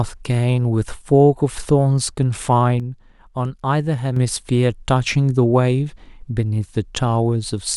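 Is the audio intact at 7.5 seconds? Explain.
Yes, the speech at 7.5 seconds plays through intact, with no dropout, click, distortion or other audible fault at that moment.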